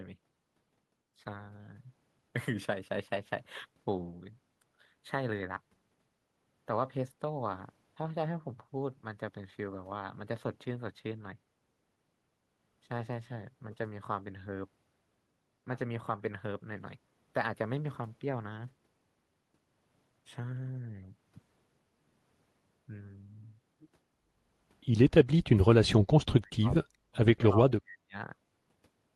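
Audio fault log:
26.27–26.74 s, 27.03–27.18 s, 27.49–28.15 s: speech suppressed in double talk. The speech drops sharply three times, by about 30 to 40 dB at worst. It likely comes from an echo canceller confusing overlapping talk with echo and muting both together.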